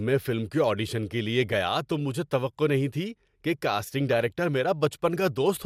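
At 1.53 s, between "کے آڈیشن کے لیے" and "تو مجھے توقع نہیں", and again from 4.11 to 4.20 s after "نہیں تھی کہ کاسٹنگ", DAB burbling appears: a very small share of bit errors slips past error correction and corrupts individual sub-bands, producing a few watery blips. On a spectrogram these show as isolated rectangular band blocks jumping in level.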